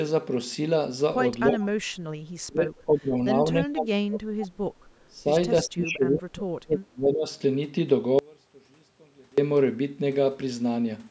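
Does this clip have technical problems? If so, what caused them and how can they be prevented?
Yes. The speech is suppressed in double talk at 1.52–1.72, 2.47–3.16, 3.42–4.51, 5.07–5.28 and 5.64–7.27 s, dipping by about 15 to 35 dB. The likely cause is the echo canceller mistaking its own talker's speech, overlapping the far-end playback, for echo and attenuating both. A better-tuned double-talk detector prevents this.

An echo leak briefly surfaces at 1.61–1.67 s as a faint copy delayed by 328 ms, around 20 dB below the speech. The loudspeaker side's canceller probably let residual echo through. Using a headset or improving that device's echo cancellation would prevent it.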